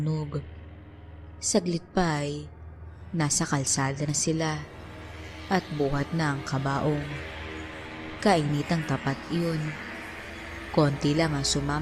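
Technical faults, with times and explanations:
No technical faults are heard, so there are no times or explanations to give.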